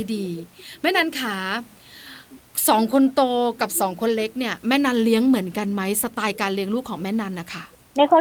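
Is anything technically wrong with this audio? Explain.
No, nothing is technically wrong with this speech recording. There is some background noise from the room, sitting about 35 dB below the speech, and it belongs to the recording space rather than to any part of the system.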